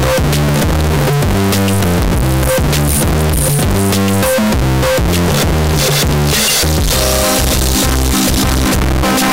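Throughout, the audio is extremely loud and harsh, with background noise as loud as the main sound, though pitch stays traceable. The waveform is a near-square block at an almost fixed, high level, and the spectrogram shows dense broadband energy. This is likely float read as integer, with 32-bit float samples decoded as 32-bit integers.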